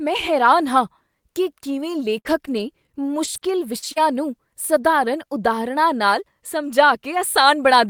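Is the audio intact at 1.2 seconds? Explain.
Yes, the speech at 1.2 seconds is intact, with no audible fault at that point.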